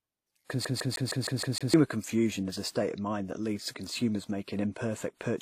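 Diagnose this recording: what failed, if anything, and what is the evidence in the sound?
Storage and playback fault: CD stuck on one turn. From 0.65 to 1.74 s, the same 156 ms fragment repeats seven times, with a brief mute at each jump. A scratch keeps throwing the laser back one track. Normal play resumes just before "confusion is a state".

Codec stage: transcoding between lossy codecs. Two different sets of compression artefacts are heard together throughout, and nothing is present above 14.9 kHz. This likely comes from a low-rate HE-AAC encode re-encoded to WMA. The second codec spent bits on the first codec's damage.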